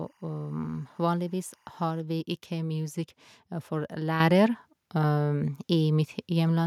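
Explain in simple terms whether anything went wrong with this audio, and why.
For the first two seconds, from 0 to 2.0 s, there's timecode bleed: a faint, steady chirping warble behind the speech. Timecode from a nearby track or cable is leaking in, flipping between pitches around 1 kHz and 2 kHz, at a rate that fits 24 frames per second.

At 4.2 s the microphone volume stepped up. The call software decided the mic was too quiet and raised its input level all at once, so the speech and the background noise both get noticeably louder together in a single jump.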